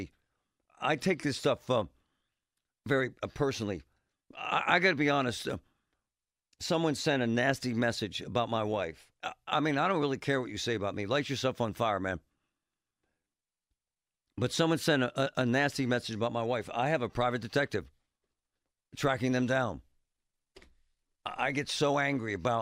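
No technical faults can be heard anywhere in the recording.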